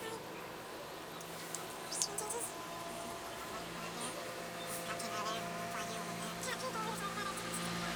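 Throughout, the audio is read two samples at a time, treating each pair as a single frame, so these sounds play at double speed, a full octave higher.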